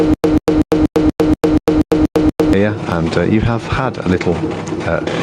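From the first instant to 2.53 s, the sound stutters with silent gaps. The same 136 ms burst returns ten times, every 240 ms, with 103 ms of dead digital silence between. A stalled stream likely kept replaying its last fragment, so the audio meant for that stretch is lost.

Gain pumping runs through the whole clip. The background swells in each quieter gap, then ducks by about 10 dB under every loud sound. The likely cause is gain set far too high, with a fast limiter clamping down on each peak. Loud and soft parts sit squashed close together.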